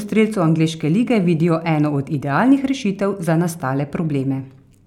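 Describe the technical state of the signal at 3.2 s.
At 3.2 s the speech signal is intact, with no audible dropout, distortion, glitch or other fault at that moment.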